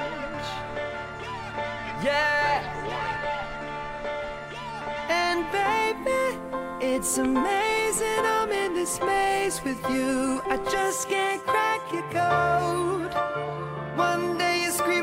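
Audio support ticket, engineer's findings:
Nothing stood out on listening.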